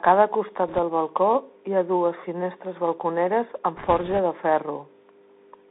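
A speech recording that sounds boxed-in and thin throughout, with a fine granular hiss under the voice, scratchy s sounds and roughness on louder, brighter syllables. Nothing comes through below about 250 Hz or above about 3.7 kHz. This is the Bluetooth CVSD headset codec: the signal is coded as a stream of single up-or-down steps, which fits a 64 kbps headset link. Its adaptive step cannot keep pace with fast, loud high-frequency movement, so those parts smear into grit, while the narrow telephone band strips the top end. Twice a rushing, crackly noise breaks over the speech, from 0.68 to 0.79 s just before "del balcó hi ha", and longer from 3.77 to 4.19 s right after "ha dues finestres balconeres". These are bit errors on a Bluetooth voice link, with around 2 percent of bits flipped. Because each CVSD bit carries only one small step and mistakes fade out, the damage spreads as a hissy crackle rather than loud clicks.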